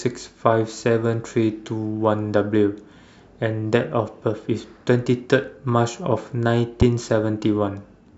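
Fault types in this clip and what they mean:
Loud pop: a sudden voltage pulse, likely from a plug, switch, static or driver glitch, was added to the signal path. From 6.81 to 6.84 s it sounds as one sharp pop, roughly 15 dB louder than the speech, which carries on beneath it.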